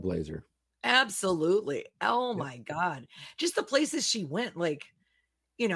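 Nothing in this speech recording reveals any technical fault.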